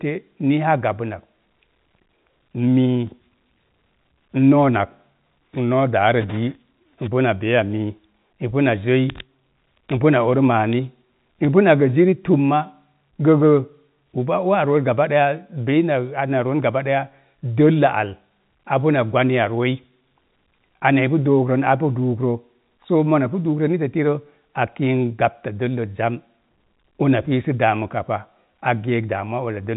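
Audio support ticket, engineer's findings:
No faults found.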